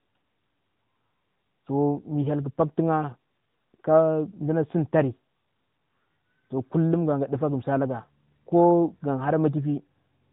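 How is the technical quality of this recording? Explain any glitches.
The recording is held back by one fault that runs the whole way through: it sounds like it's been through the AMR narrowband mobile codec, the old 2G/3G phone-call codec. Everything above 4 kHz is simply gone, so the speech has that boxed-in, phone-line dullness with no air or sibilant sparkle. The codec rebuilds the voice from a vocal-tract model excited by a handful of pulses every few milliseconds, and at this level of damage you plainly hear it: a buzzy, synthetic edge on the speech, which fits one of the higher AMR-NB modes around 10.2 kbps.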